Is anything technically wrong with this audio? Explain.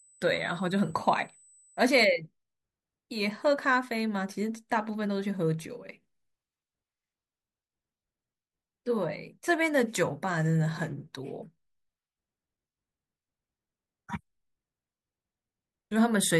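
Yes. USB whine runs from 0.0 to 2.0 s as a steady, fixed-pitch tone at 8 kHz, roughly 30 dB below the speech. The bus's current draw in 125-microsecond microframes leaks into the audio through power or ground, producing this thin, high whistle.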